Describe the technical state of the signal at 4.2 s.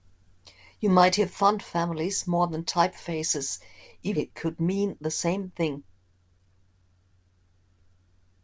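At 4.16 to 4.18 s the signal shows a skip ahead. Roughly 0.7 s of speech is missing, dropped in transit or discarded by an overflowing jitter buffer while later audio was already queued. Nothing fills the hole, so the material on either side is spliced almost directly. The result is an abrupt forward jump with no silence, and playback latency shrinks by about the same 0.7 s.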